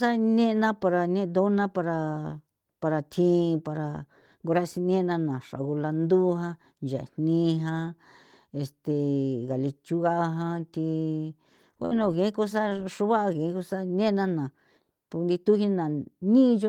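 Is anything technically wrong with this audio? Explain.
Yes, the speech has two packet-loss faults close together.

From 11.85 to 11.93 s there is a burst of packet loss. Roughly 60 ms of audio failed to arrive in time, and the receiver bridged it with about 56 ms of concealment, extending the last received sound while lowering its level. That produces a brief held buzz or fading hiss in place of the real signal, and when audio resumes, the material from the gap is gone, so the speech jumps slightly forward.

At 12.69 to 12.73 s there is a short concealed packet loss. About 20 ms never reached the decoder in time, and the receiver synthesised a matching 20 ms by continuing the preceding sound, pitched if voiced and noise-like if not, then cross-fading back into the real stream. It is heard as a momentary smear or wobble, and a brief consonant in that spot may be lost.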